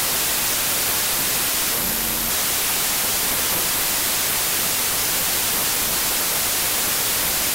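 Throughout, loud noise buries a slowed sound at 0.75 speed. That is wrong sample width, which fits 32-bit data read as packed 24-bit. A simple sample-rate mismatch would change speed without the noise.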